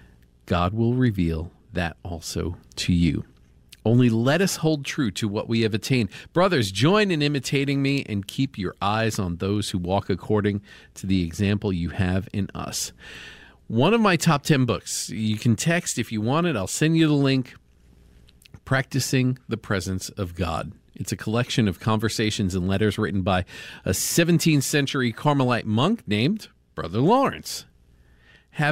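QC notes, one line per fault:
No faults found.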